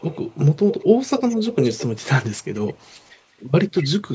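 Echo leak occurs at 0 to 0.45, 0.63 to 0.87, 1.18 to 1.96, 2.23 to 3.18, 3.76 to 3.86, and 4.1 s onward. A delayed copy of the speech trails by about 218 ms. It is loudest from 0.63 to 1.96 s and faintest from 2.23 to 3.18 s. The likely cause is an echo canceller letting loudspeaker pickup through.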